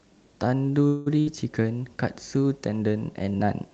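At 0.87 s the sound stops advancing and the last fragment is stretched into a fading buzz or hiss for about 0.19 s, until 1.08 s. Playback then picks up where it left off, with nothing skipped. This is a call audio freeze, likely caused by packets stalling in transit and the jitter buffer running dry.

Shortly after, from 1.20 to 1.28 s, a burst of packet loss occurs. About 60 ms of audio never arrived in time, so the receiver covers the hole with a decaying continuation of the previous sound before jumping ahead, leaving that stretch missing. Throughout, the Opus call path limits the top end to about 8 kHz.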